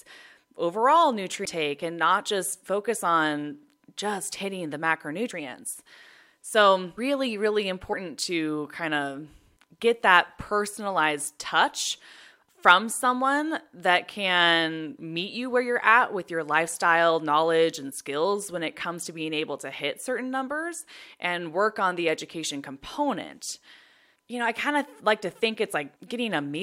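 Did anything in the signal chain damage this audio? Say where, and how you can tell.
Yes, compressed frames were skipped, at 1.44 s and again at 6.97 s. At each point the speech jumps ahead by about a third of a second, roughly 15 frames the first time and 10 the second, which fits a codec working in blocks of about 23 ms. This points to the codec or storage stage, where damaged or missing frames were dropped before playback.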